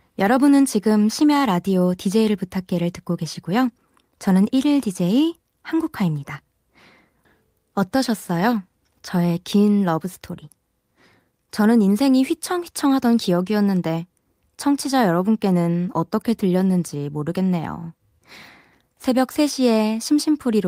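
No faults detected anywhere in the speech recording.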